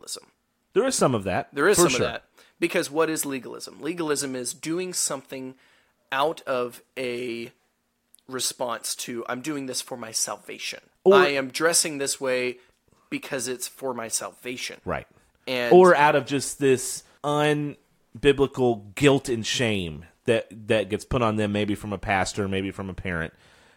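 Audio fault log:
No fault is heard in this speech clip.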